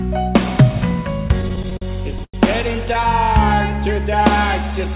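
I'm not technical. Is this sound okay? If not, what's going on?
No. Between about 1.28 and 2.36 seconds the sound hiccups through repeated stalls (stutter). The data carrying it arrived late, so the receiving end kept running out and stretching the last bit of sound to fill each pause. That happens ten times, the longest pause about a tenth of a second, and nearly a quarter of that stretch is filler. Nothing is actually lost, but it drags and judders. The muffled top end, with nothing above 4 kHz, is just the usual phone-call sound.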